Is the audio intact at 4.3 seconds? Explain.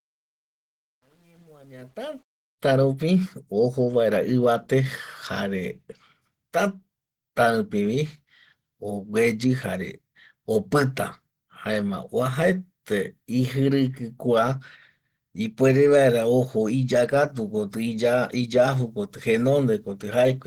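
No. At 4.3 s, as throughout the clip, the speech sounds muffled and hoarse with grainy texture, likely from Opus compression in hybrid mode at a low bitrate near 16 kbps.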